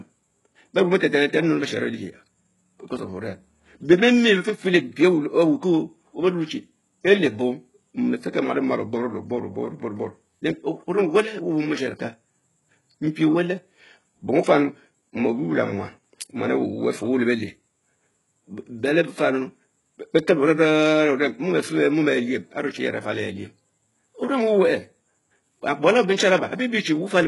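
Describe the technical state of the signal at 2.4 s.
At 2.4 s the speech carries damage that runs through the whole clip, likely from HE-AAC compression at a very low rate, consistent with roughly 12 kbps. The treble is synthesized by copying lower bands upward rather than coded, so s sounds come out gritty and metallic. On a spectrogram, energy stops sharply near 11.5 kHz, and the upper region shows blocky, smeared patches whose harmonics fail to line up with those below the crossover.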